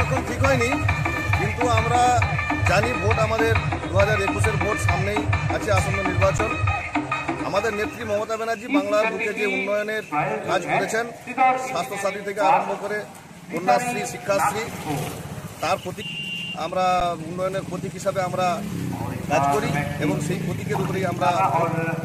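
At 6.38 s and again at 17.00 s, there is an underrun with held sample. The output buffer ran dry for 10 ms. The converter froze on its last value, so the waveform goes flat. Playback then resumes where it stopped, so each gap ends softly.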